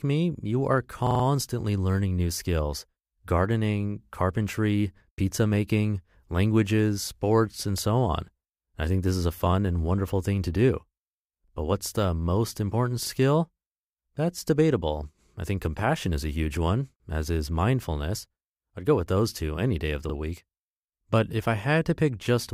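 At 1.07 to 1.24 s, between "me you are" and "learning new skills gardening", a repeated buffer makes one 43 ms slice play five times in a row, heard as a stutter. At 11.48, 13.06 (after "what's the most important") and 20.10 s (after "two any day of") a slice plays twice. Audio arrived late, so the device replayed its last buffer, whose length fits 2048 samples. The waveform shows identical blocks with abrupt joins, and the spectrogram shows thin vertical lines between repeated patterns.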